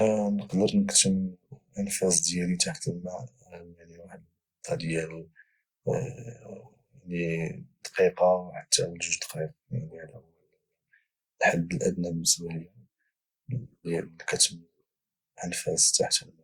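Nothing in this recording stands out as a technical fault, so there's no moment in it worth flagging.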